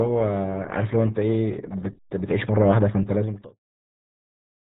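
Throughout the clip, the speech has gone through the RealAudio 14.4 codec, a dial-up-era coder whose heavy compression fits an 8 kbit/s stream. Nothing above 3.9 kHz survives, so the speech sounds muffled and gargly, even through the smooth fade-out from about 3 s to 3.61 s.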